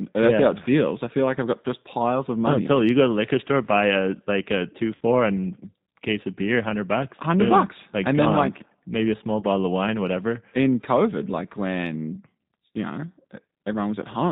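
G.729 codec coding runs throughout: the speech is rebuilt at 8 kbit/s from a filter, pitch predictor and sparse pulses, so nothing passes above 4 kHz and it sounds plainly rough and synthetic.

VoIP packet loss concealed by the speech codec appears from 4.95 to 5.03 s, after "a like a two" and before "and case of beer". About 60 ms of audio, which fits three lost packets, is replaced by a fading extrapolation of the last frame. It appears again from 9.40 to 9.44 s, between "like maybe a small" and "of wine whatever", where a 20 ms gap, consistent with one lost packet, is briefly smeared.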